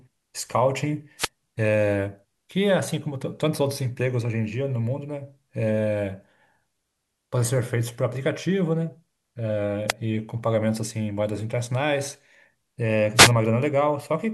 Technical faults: wireless microphone noise hit

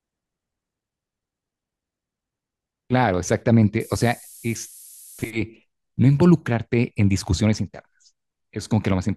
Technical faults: low bit depth with noise shaping

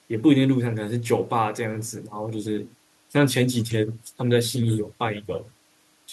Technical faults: none

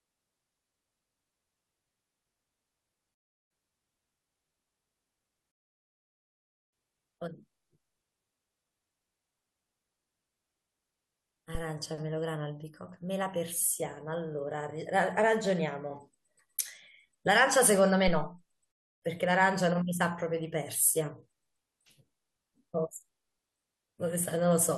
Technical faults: rebuffering stall; phantom power thump

